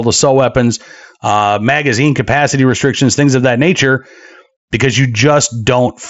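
It's a speech clip, and nothing in it is technically wrong.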